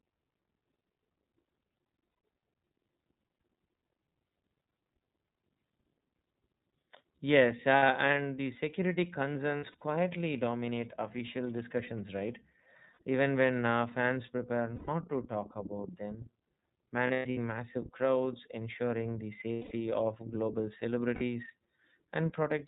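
Throughout, the speech carries plainly audible iLBC codec damage: nothing above 4 kHz, and a slightly rough, synthetic edge from coding each 30 ms frame's excitation independently at 13.33 kbps. Unlike a plain low-pass filter, the roughness sits inside the remaining band itself.

Lost iLBC frames break in at 1.94–2.18 s, 7.77 s just before "and the security", 9.57–9.82 s, 12.93–12.97 s, 14.75–14.89 s between "when uh fans prepare" and "to talk about them", 17.07–17.38 s, 19.53–19.72 s between "massive crowds ensuring the" and "of global", and 21.15–21.22 s. Each gap is filled by a held, buzzy, breathy vowel-like tone from the repeated last pitch cycle. Where a real dropout would be silent, this fill sounds like a held vowel, and the voice is right again almost at once.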